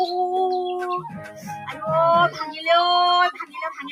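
A speech-tuned noise suppressor was left running on non-speech audio, treating steady tones, ambience and decaying tails as noise. This is the noise suppressor applied to music or sounds. Its gain keeps shifting through the whole clip, with the level swinging by roughly 10 dB. Onsets mostly pass intact, but anything sustained sinks, so the sound pumps and thins instead of holding a steady body.

In two places the suppressor clamped down harder still, so the sound was cut by the noise suppressor. From 1.16 to 1.45 s the level drops by about 7 dB. From 3.36 to 3.57 s the drop is deeper, about 13 dB. In both stretches the held or fading parts lose level and their decay is cut short. The sound seems to duck away for a fraction of a second before returning.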